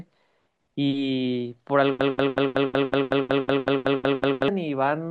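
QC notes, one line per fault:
2.01–4.48 s broken-record loop: a 186 ms speech fragment repeats 13 times, likely from a stalled stream; identical blocks tile the spectrogram, and the intended audio is lost.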